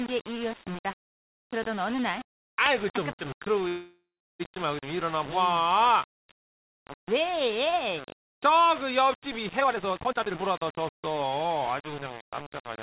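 Throughout the speech, a grainy distortion follows the signal, sitting only about 15 dB below it and making quiet passages gritty. This likely comes from low bit depth without dither, consistent with rounding to about 5 bits.

From 3.68 to 4.42 s, the last sound is held as a fading buzz or hiss that falls to about 0.34 s of silence before the speech resumes where it stopped. This is likely a call audio freeze: the jitter buffer ran empty and a 0.72 s gap was added with nothing lost.

From 9.61 to 11.92 s, a jitter buffer speed-up runs the speech about 1.3 times faster at unchanged pitch. Roughly 0.7 s is cut out in short pitch-period pieces, so delivery sounds hurried.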